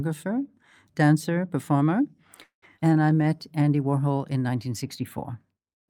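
At 2.43 s the speech halts in a call audio freeze lasting until 2.64 s. The last sound is stretched into a fading buzz or hiss, then about 100 ms of silence, likely because delayed packets emptied the jitter buffer. On a spectrogram, smeared harmonics give way to a blank gap before the speech resumes.

Shortly after, at 2.76 to 2.80 s, a skip ahead cuts out roughly a tenth of a second of speech. The two sides are joined by only a 16 ms patch. The waveform shows an abrupt splice, and the spectrogram shows a sudden shift in formant pattern with no transition.

From 2.80 to 3.37 s a jitter buffer slow-down plays the speech at 86% speed without changing pitch, adding 88 ms by repeating pitch periods. Sounds are drawn out. The spectrogram shows horizontally stretched formants, and the waveform shows repeated, near-identical cycles.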